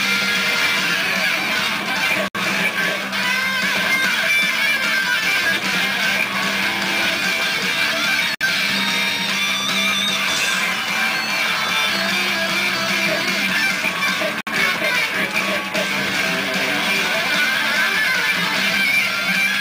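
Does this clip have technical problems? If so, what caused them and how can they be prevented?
Yes. Short gaps at joins of encoded pieces open at 2.28, 8.35 and 14.41 seconds, every 6 seconds. Each lasts about 60 to 66 ms, with smeared edges. The sound then resumes where it stopped. Separately encoded pieces were joined with their encoder delay and end padding left in. Trimming that delay and padding before joining, or encoding the whole piece in one run, prevents this.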